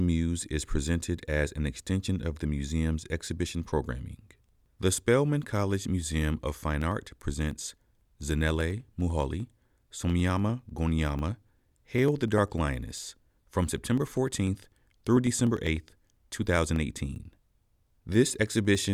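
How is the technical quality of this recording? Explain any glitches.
The recording has one clear technical fault. Periodic USB or driver dropouts run from 6.02 s to 18.85 s: about every 0.1 s, something stalls the audio path and roughly half a millisecond of sound is skipped outright. The result is a steady ticking, about ten per second, riding on the speech wherever there is signal.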